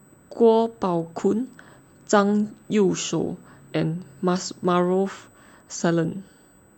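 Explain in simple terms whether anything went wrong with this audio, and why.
A USB whine runs through the whole recording. The USB connection pulls power in tiny regular bursts, and that electrical rhythm leaked into the audio. You hear it as a faint, steady, high-pitched tone at 8 kHz beneath the speech throughout.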